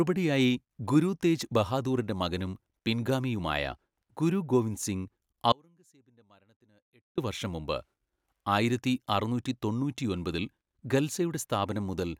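A likely brief loss of the feed, with the downstream path still live, produces an audio dropout to a faint residue in this speech clip from 5.52 to 7.18 s. After "പിൻഗാമിയുമായ ഗുരു ഗോവിന്ദ് സിംഗ്", the sound falls abruptly to a faint trace, roughly 35 dB down, for about 1.66 s before returning at "വർഷം മുമ്പ്".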